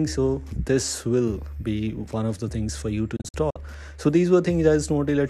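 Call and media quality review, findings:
Digital broadcast dropout, 3.16 to 3.56 s. Receiver muting on failed or missing frames: short silent holes, longest 48 ms, about 144 ms lost in total across 0.38 s, each cut with an 8 ms fade. Program audio not recovered.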